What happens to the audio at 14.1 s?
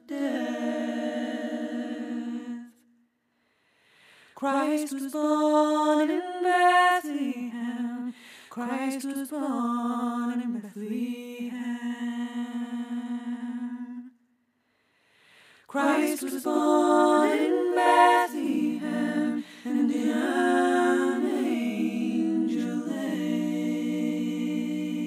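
At 14.1 s the channel delay (doubling) is present, as it is throughout. One channel arrives about 93 ms late, which fits a 4096-sample buffer. The two are summed to mono. Every sound is followed by an equally loud slap echo.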